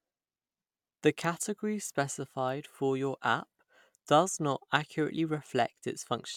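No technical faults can be heard anywhere in the speech.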